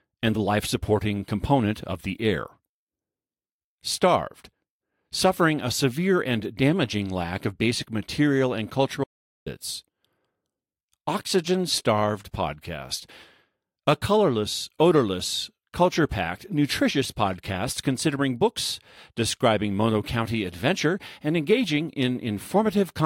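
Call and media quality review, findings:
Audio dropout to silence, 9.04–9.46 s, after "of basic material and". Input path likely lost (device disconnect, link failure or mute) while the encoder kept writing silence. Speech cuts to silence for about 0.42 s, no room tone, content lost.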